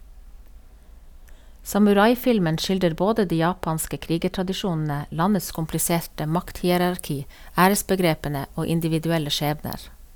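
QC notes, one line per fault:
5.49–10.15 s, pre-emphasis left on: right after "de japanske krigertradisjonene landets" the speech turns thin, bright and hissy. The treble was lifted for recording or transport, but the matching de-emphasis cut never followed, so the highs stay raised by about 8 dB at 10 kHz relative to 1 kHz. The tilt fits the CD 50/15 µs emphasis curve. Sibilants sharpen, and the raised top end carries on to the end of the clip.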